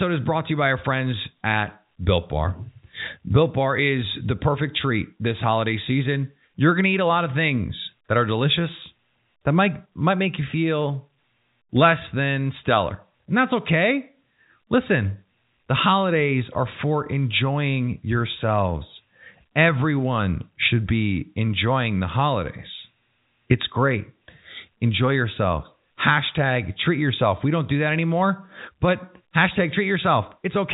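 No technical faults are audible.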